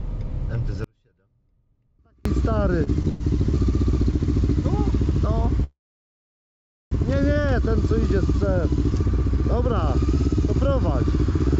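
From 0.84 to 2.25 s, the wanted signal was likely lost while the path after the break stayed live. That makes an audio dropout to a faint residue: the sound cuts out abruptly for about 1.41 s, leaving only a faint trace around 35 dB below normal level.

At 2.84 s a packet arrived late and the jitter buffer ran dry, causing a short stall from a late packet. The receiver stretched the last sound by 28 ms, so it is briefly held with a slight buzz or dip while nothing is lost.

Two call audio freezes follow, likely from packets held up in transit. From 3.08 to 3.23 s, the last sound continues as a fading buzz or hiss for 118 ms. From 5.64 to 6.94 s, it is extended for 1.28 s, mostly as 1.16 s of silence, then resumes where it stopped. Throughout, the G.722 call path leaves nothing above 8 kHz.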